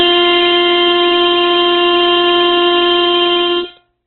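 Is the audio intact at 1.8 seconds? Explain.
No, the music at 1.8 s, as throughout, sounds rough and grainy with nothing above 4.3 kHz, likely Opus compression starved of bits and filling bands with noise.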